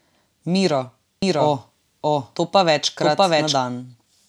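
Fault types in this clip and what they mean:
Doubled audio track: from 1.22 s to 3.56 s a second full-band copy of the speech runs about 0.7 s behind, roughly as loud as the original, likely from a second capture path or misaligned edit. Unlike echo or reverb, it never decays or gains room colour, and it starts and stops abruptly.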